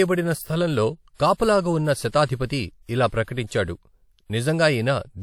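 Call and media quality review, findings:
Pre-echo, speech: hiss smearing attacks at 1.14–1.20 s (before "కాపలాగా ఉన్న"), 3.07–3.12, 3.24–3.28, 3.46–3.51 s, 37–54 ms each. Transform codec spreading block quantisation noise ahead of attacks.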